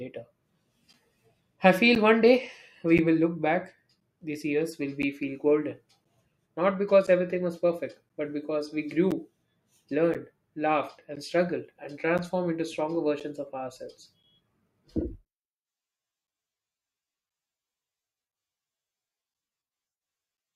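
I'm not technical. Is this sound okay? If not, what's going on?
No. There's a steady tick running through this speech, roughly once a second, from about 0.93 s to 20.38 s, about twenty in total. That's periodic USB or driver dropouts: something on the computer briefly blocks the audio connection every 1.024 s, and each time roughly a hundredth of a second of sound gets swapped for silence. Because it's so regular, it sounds like a clock ticking under the talking.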